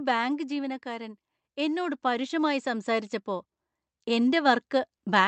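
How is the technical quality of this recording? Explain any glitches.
The level is unstable: automatic gain control pulls the level down right at the start, then reverses and pushes it back up for the rest of the clip. The audio reaches the listener through an Opus call path whose top end stops near 8 kHz.

Automatic gain falling runs from 0.05 s to 0.88 s. The gain control judged the opening input too hot and reduced its gain step by step, by about 4 dB in total. Because the gain stage sits before everything heard, the speech and the background noise drop together. It sounds like the speech starting loud and then sagging, rather than the talker actually speaking more softly.

Automatic gain rising begins at 0.83 s, overlapping the end of the drop, and continues through to the end of the clip. The controller now treated the input as too quiet and kept raising its gain gradually. The result is a slow swell over several seconds in which the speech and the room noise rise together. 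The noise floor rises along with the voice as the clip goes on, which gives the gain change away.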